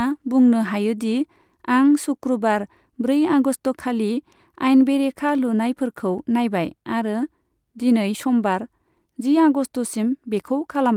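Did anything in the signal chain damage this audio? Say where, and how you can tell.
No, nothing along the chain seems to have damaged this speech; I can't hear any point where something went wrong.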